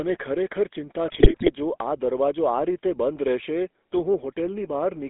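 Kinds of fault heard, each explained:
GSM full-rate codec: The whole clip passes through the old GSM speech coder, band-limited to roughly 250 Hz to 3.5 kHz. Plain buzzy, gravelly roughness colours the speech.
GSM bit errors: From 1.08 to 1.52 s corrupted data reaches the decoder. Frame parameters go wrong, so the speech breaks into squawks, pops and gargling.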